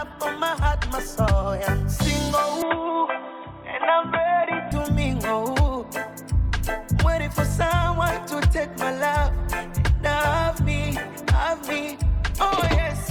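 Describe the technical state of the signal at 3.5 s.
At 3.5 s the sound is band-limited, with nothing above 3.8 kHz, from 2.62 to 4.72 s. This is likely an input switched to a poorer device, with new background noise around 40 dB down.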